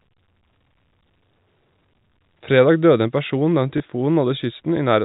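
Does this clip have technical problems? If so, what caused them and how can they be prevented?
Yes: packet loss with last packet repeated, from 3.78 to 3.80 s. One 20 ms packet went missing and the receiver replayed the previous one, leaving a small blip. On a waveform, that stretch shows a duplicated segment with a step discontinuity at each boundary. A spectrogram shows a thin vertical line at each join. A better network path, a jitter buffer, and proper packet loss concealment would prevent it.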